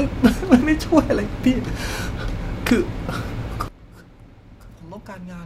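A digital gain setting was likely applied without a ramp at 3.68 s, a sudden gain jump dropping the speech and background noise together by about 18 dB until the end.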